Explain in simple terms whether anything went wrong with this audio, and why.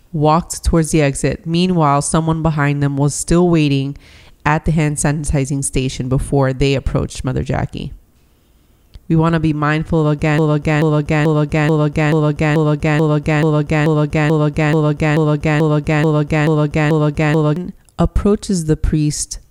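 A broken-record loop runs from 10.38 to 17.56 s. The same 0.43-second fragment plays back to back 17 times. The player or stream likely stalled and kept repeating the last piece it held, so the sound that should have played then is lost.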